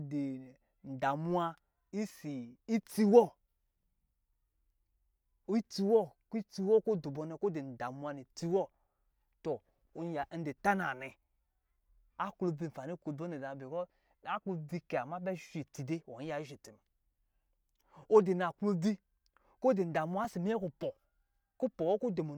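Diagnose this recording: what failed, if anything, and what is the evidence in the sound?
A repeated buffer at the driver stage: new audio arrived late, so one short block, which fits a 64-sample buffer, played three times at 20.25 s, heard as a brief click or buzz.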